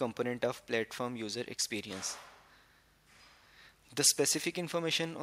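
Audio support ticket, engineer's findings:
No faults found on listening; nothing audible to attribute to any component, so no action needed on this ticket.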